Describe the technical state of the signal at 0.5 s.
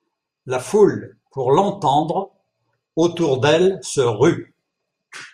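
At 0.5 s the speech signal is intact, with no fault present at that moment.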